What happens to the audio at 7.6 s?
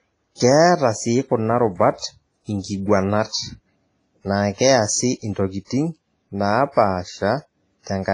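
At 7.6 s the speech sounds ringing and washy, with hiss breathing with it and nothing above 10.6 kHz. This is likely heavy WMA compression at a low bitrate, present throughout.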